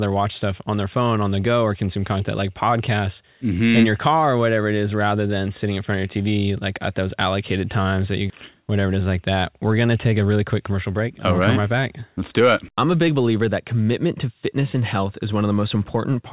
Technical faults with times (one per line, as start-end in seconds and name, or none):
8.30 skip ahead
10.12-13.16 jitter buffer speed-up